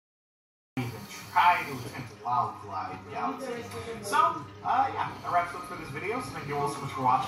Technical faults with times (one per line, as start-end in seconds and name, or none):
0.00-0.77 cut-off start